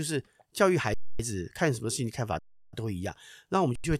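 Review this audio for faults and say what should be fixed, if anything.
Three underruns with held sample show up, at 0.94 to 1.20 s, 2.39 to 2.73 s and 3.76 to 3.84 s. The output buffer ran dry, the converter sat on its last value, and the speech flatlines, then resumes softly where it stopped. Give the playback buffer more headroom.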